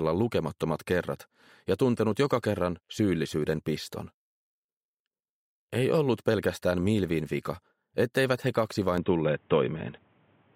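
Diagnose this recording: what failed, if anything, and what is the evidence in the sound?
At 8.98 s the sound turns dull and boxy, with nothing above 3.8 kHz to the end. There is no gap. Level shifts by roughly 5 dB. A new noise floor sits around 40 dB down. Likely cause: input switched to a poorer device at the driver stage.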